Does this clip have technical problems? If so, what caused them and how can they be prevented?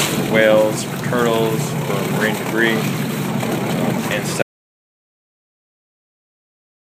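Yes. At 4.43 s the sound cuts off mid-flow and total silence, with no room tone, runs to the end of the clip: an audio dropout to silence. The likely cause is lost input from a disconnected device, failed link or stray mute while recording continued. Securing connections, checking mute states and monitoring input levels during recording would prevent it.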